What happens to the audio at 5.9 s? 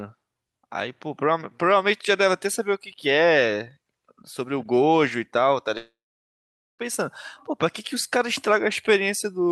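At 5.9 s you're inside a long network dropout running from 5.77 to 6.82 s. The speech smears into a short fading buzz, then goes silent for about 0.84 s before resuming with roughly a second missing. That's most likely lost packets the receiver couldn't conceal.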